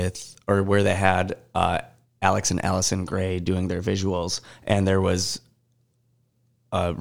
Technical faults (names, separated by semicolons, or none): none